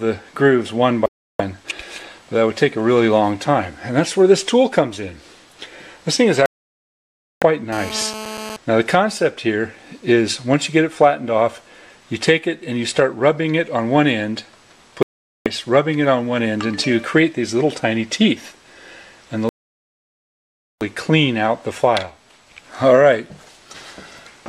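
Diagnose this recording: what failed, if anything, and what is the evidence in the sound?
Digital broadcast dropouts at the reception stage: the sound mutes at 1.06–1.40 s, 6.46–7.43 s, 15.03–15.46 s and 19.49–20.82 s, holes of 0.34 to 1.32 s. The receiver lost valid frames and silenced output until clean frames returned. Whatever was transmitted during each gap is gone.

GSM phone buzz in the analogue wiring: from 7.73 to 8.57 s a hard, raspy buzz at 217 Hz with dense harmonics sits about 13 dB below the signal. It stays steady, as from a nearby 2G phone in a call, whose burst transmissions were rectified by the audio circuitry.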